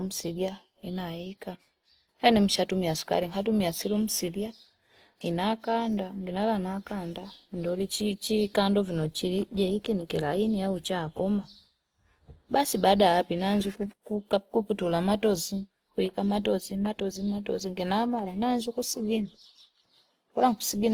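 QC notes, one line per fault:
Throughout, Opus compression: the speech sounds grainy and rough, with upper detail turned noisy rather than missing, and content still reaching 20.3 kHz. This is likely the Opus music (CELT) mode near 24 kbps, which keeps band energy but fills bit-starved bands with folded spectrum or noise.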